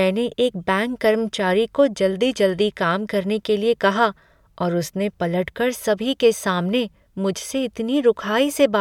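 No technical faults are audible.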